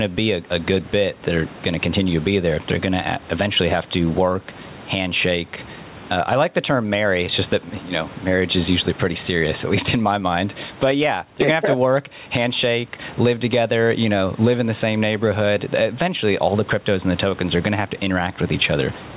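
Speech with gain pumping throughout. The room background sits about 34 dB below the speech, and the gain swings by around 15 dB, likely from far too much input gain driving a fast limiter. Nothing is heard above 4 kHz, consistent with a narrowband G.711-type call codec.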